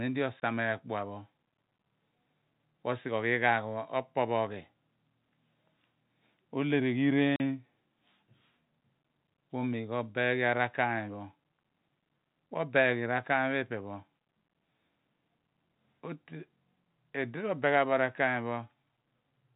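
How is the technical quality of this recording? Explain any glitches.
The recording has two short dropouts caused by packet loss filled with silence. The telephone-band G.711 coding underneath behaves as expected, with nothing above 4 kHz.

From 0.40 to 0.42 s, and again from 7.36 to 7.40 s, packets of audio failed to arrive and the receiver inserted silence instead of reconstructing them. The first hole lasts 20 ms, which fits a single lost 20 ms packet. The second lasts 40 ms, consistent with two consecutive packets. Each cut starts and stops abruptly, so the speech drops out with hard edges.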